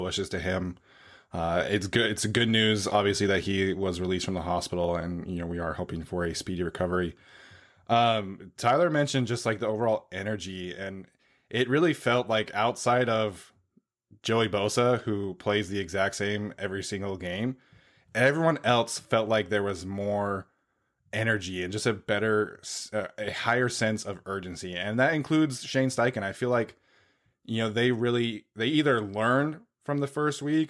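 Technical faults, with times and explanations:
No technical faults can be heard in this speech recording. There is nothing here to place on a timeline.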